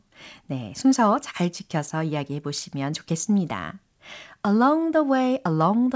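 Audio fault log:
No fault is logged for this speech clip.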